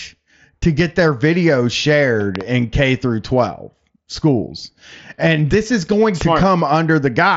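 A sharp double pop breaks through the speech at 2.36 to 2.43 s, peaking about 15 dB above the speech, and a second, softer pair of about 10 dB follows from 6.21 to 6.45 s, right after "and this is going". The speech carries on beneath both. This is a loud pop, likely a brief voltage pulse from a switch, plug contact or static discharge that the later circuitry shaped into a paired thump. It sits over the narrowed mSBC headset sound, which has nothing above 7.7 kHz.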